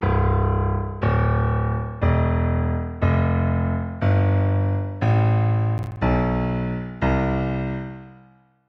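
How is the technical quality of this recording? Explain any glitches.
One glitch stands out in this recording of everyday sounds.

Processor overload crackle occurs from 5.78 to 5.97 s. The processor repeatedly missed its deadline for short buffers of around 10 ms, leaving a handful of hard-edged silent gaps. Together they produce a brief burst of gritty crackle over the sound before the load passes.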